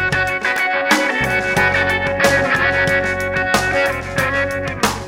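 Right at 0.56 s there's a sharp snap laid over the sound, over in a few milliseconds and peaking fairly hot, somewhere around -10 dBFS. That's an electrical switching spike. It's a brief burst of interference that didn't come from the source itself. It most likely came from a nearby switch, motor or static discharge arcing and getting picked up by the audio line. You hear it as a sharp snap that sits on top of the audio.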